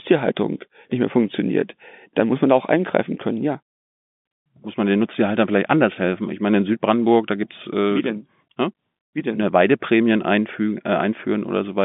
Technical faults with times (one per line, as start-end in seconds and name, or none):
none